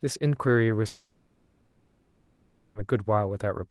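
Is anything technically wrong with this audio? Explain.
Yes. From 0.87 to 2.78 s the speech gives way to a smeared buzz that thins out into low noise and a brief silence before the voice resumes, with nearly 1.9 s lost. This is likely a long network dropout, with the Opus call path's concealment stretching the last sound across the gap.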